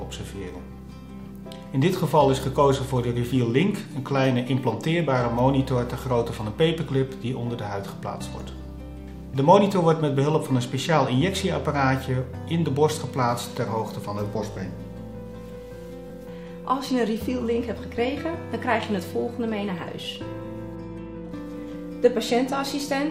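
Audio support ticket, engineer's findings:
Repeated buffer at 14.52–14.56 s (20 ms block played twice more) and 16.08–16.10 s (played once more). Playback underrun; the device replayed its last buffer. Audible as short stutter-buzz, roughly 40 ms and 20 ms of audio lost. Waveform shows identical 20 ms tiles with hard joins; spectrogram shows vertical seams.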